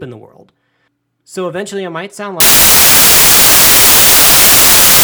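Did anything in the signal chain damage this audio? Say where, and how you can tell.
Yes. At the sample-format conversion stage, the reader assembled each sample from the wrong bytes, so the noisy low-order bits took over as the dominant part of every value. From 2.40 s to the end at 5.04 s, the speech becomes loud, harsh broadband noise, close to white on the louder sounds.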